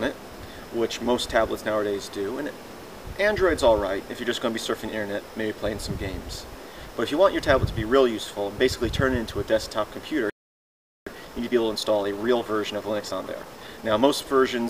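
At 10.30 s the audio just stops dead and stays silent until 11.07 s, about 0.77 s of nothing, before picking up again. That's a playback stall. The player most likely ran dry of buffered data or had its output thread held up, so it had nothing to send out until it caught up. It's a clean gap mid-flow rather than a fade or a dropout burst, which fits that kind of starvation.

Right after it comes back, from 11.07 to 14.07 s, you get time-compressed catch-up. The player is eating into the backlog the stall left behind by trimming tiny slices out and cross-fading across the joins, running at roughly 1.15 times normal speed for those 3 seconds. Pitch stays where it should, so it doesn't sound chipmunky, just rushed.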